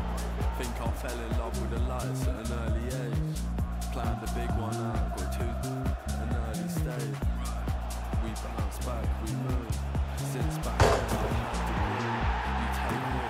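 A short run of CD scratch ticks, six small regular clicks, breaks into the audio between 6.03 and 7.02 s, the longest lasting only a few milliseconds. A scratch on the disc passes the laser once per revolution, each time wiping out more data than error correction can restore, so the player patches or mutes those few samples.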